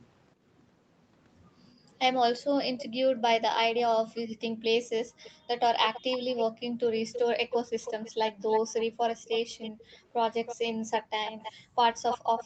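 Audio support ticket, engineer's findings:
Echo leak, 2.36–2.85 s and 3.76 s to end: delayed copy at 360 ms, then 322 ms, about 15 dB then 10 dB down. Likely far-end echo canceller residue. Spectrogram shows faint repeated harmonics trailing phrases.

Background gated by the echo canceller at 2.86–3.05, 4.28–5.47, 9.71–10.0, and 11.01–11.76 s: room noise ducked about 40 dB (about 24 dB at 9.71 s). Waveform shows flat noise-floor holes; spectrogram shows darker gaps.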